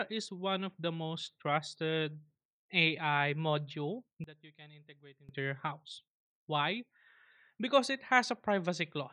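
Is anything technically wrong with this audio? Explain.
Yes, there's one problem. From about 4.24 to 5.29 s, just before "your house", the speech suddenly drops by about 20 dB and turns faint, then snaps back. That's most likely one channel inverted. With one side's polarity flipped, everything the two channels share cancels when they're summed to mono, and the centred speech goes with it. All that's left is the small difference between the channels, which is why it sounds so quiet.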